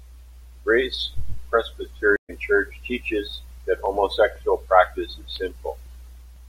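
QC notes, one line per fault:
2.16–2.31 s stream reconnect: 125 ms of silence, then the speech picks up roughly a tenth of a second later, as a fresh decoder restarts mid-stream after the link drops.
3.86–6.36 s periodic USB or driver dropouts, from just after "teaches that": around a millisecond of audio skipped every 0.5 s, about seven times, heard as evenly spaced ticks from a blocked bus.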